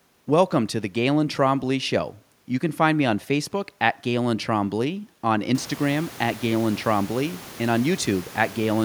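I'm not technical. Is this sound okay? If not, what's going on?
Yes, this sound is okay; the background noise of the room gets noticeably louder from about 5.5 seconds, but that is part of the recording itself and not a problem with the sound.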